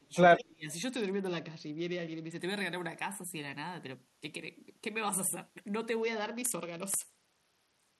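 An echo canceller likely mistook overlapping talk for echo, cutting the speech by about 25 to 30 dB from 0 to 0.14 s and 0.36 to 0.68 s, so it dips and breaks off. From 0.91 to 2.40 s and again from 6.02 s to the end, a Bluetooth SBC bit pool drop starves the upper sub-bands, dulling the treble and adding gritty quantisation noise, consistent with the bit pool falling from around 28 to 8, roughly 72 kbps.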